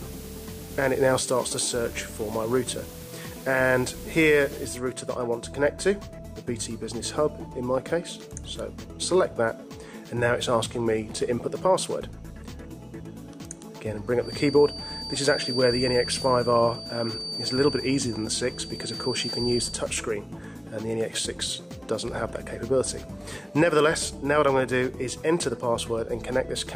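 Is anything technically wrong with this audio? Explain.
Yes, there are two faults.

From 0.00 to 4.77 s the audio has low bit depth with dither. The signal is carried on only 7 bits, and the dither added before rounding turns the coarse quantisation error into a steady, even hiss roughly 20 dB below the signal, with no audible distortion.

From 14.18 to 19.81 s a thin, steady feedback whistle at 4.6 kHz sits behind the sound, roughly 10 dB below it and swelling and fading slowly in level. The likely cause is a loudspeaker-to-microphone loop held just at the edge of feedback, sustaining one frequency without running away.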